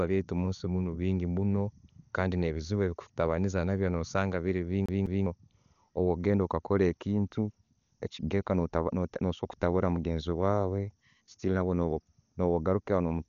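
A speech recording with two separate problems. For its whole length the audio is dull and band-limited, with nothing above about 6.9 kHz, and the upper band is filled with a rough, fluttering hiss that sits around voiced sounds rather than clean harmonics. That pattern of a narrowed bandwidth plus noise standing in for detail is the signature of heavy Dolby Digital compression, likely an AC-3-family encode at a very low bitrate consistent with roughly 48 kbps, where many frequency lines get no bits and are replaced by noise on decoding. Separately, from 4.86 to 5.26 s there is a CD stuck on one turn: a 0.20 s stretch of audio plays twice in a row, with a brief mute at each jump back, giving the fast, evenly spaced stutter of a disc skipping on a scratch.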